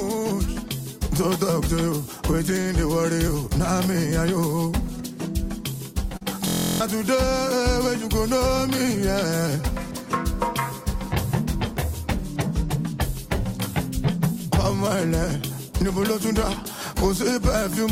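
At 2.61 s a short stall from a late packet holds the audio for 43 ms: the jitter buffer ran dry, so the last sound was stretched until the packet arrived at 2.68 s, with nothing skipped. A spectrogram shows the spectrum frozen into flat horizontal bands.

Short concealed packet loss follows at 6.17 to 6.23 s. About 40 ms of audio never reached the decoder, and 37 ms of synthetic continuation covers the gap, heard as a brief smear. On a spectrogram the spectrum blurs and smooths over, then rejoins the real signal.

From 6.48 to 6.80 s a system hang loop takes over. The machine froze while the hardware kept replaying a 23.22 ms stretch, which fits a 1024-sample buffer. It repeats over a dozen times as a steady 43.1 Hz buzz, and around 0.3 s of audio is lost. The waveform shows identical copied cycles, and the spectrogram shows evenly spaced vertical striations.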